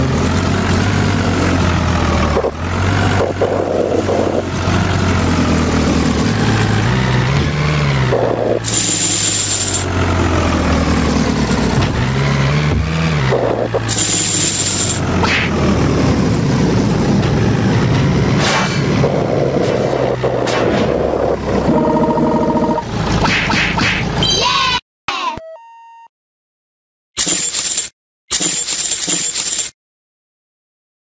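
The recording has two audible faults, heard through call microphone processing that leaves nothing above 8 kHz. Gain pumping runs throughout, with level swinging about 20 dB. The likely cause is input gain set far too high with a fast limiter clamping it. On a waveform the envelope looks flattened, and on a spectrogram the noise floor visibly breathes. Clock drift buffer slips also occur, about ten regular clicks from 2.65 s to 30.42 s, one every 3.09 s. These likely come from two devices' clocks disagreeing by a few hundred ppm, so the buffer periodically drops or repeats a small block of samples. They show as thin vertical broadband lines on a spectrogram and small discontinuities in the waveform.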